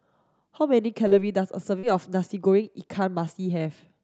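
At 1.07 to 1.14 s and again at 1.79 to 1.86 s there's short concealed packet loss: about 40 ms of the call arrived too late, so the decoder stretched the preceding speech to cover the gap and blended back, leaving a quick smeared wobble each time.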